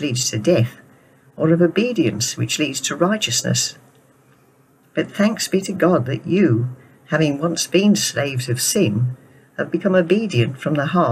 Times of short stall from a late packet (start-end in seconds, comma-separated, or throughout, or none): none